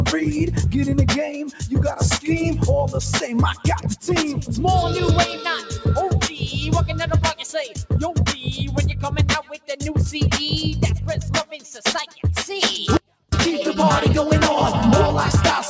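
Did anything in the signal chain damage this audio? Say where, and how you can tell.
Yes. The damage sits in the call processing. A noise suppressor built for speech was left running on this non-speech audio. Across the whole clip the level swings by around 5 dB as it decides what counts as noise. Held material and tails sink while onsets get through, so the sound pumps and thins. The band tops out at 8 kHz, as call microphone processing normally does.

There is also sound cut by the noise suppressor at 1.46 to 1.65 s, 5.61 to 5.79 s, 9.43 to 9.76 s, 11.45 to 11.84 s and 12.07 to 12.25 s. Each dip lasts a few hundred milliseconds. The deepest drops are about 9, 6, 11, 11 and 8 dB. These are passages that the suppressor mistook for background and pulled down harder than their surroundings.

Then there is an audio dropout to a faint residue from 12.97 to 13.32 s, about 350 ms. The sound cuts out abruptly rather than fading. 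Only a faint trace remains, about 35 dB below normal level. It returns just as suddenly. The path downstream stayed live while the wanted signal vanished, which likely points to a brief loss upstream in the network or buffer stage.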